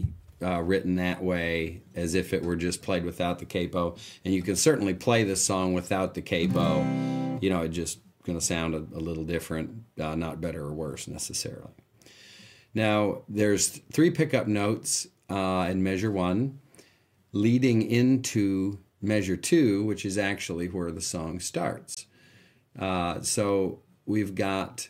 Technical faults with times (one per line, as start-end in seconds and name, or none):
21.94-21.97 Bluetooth dropout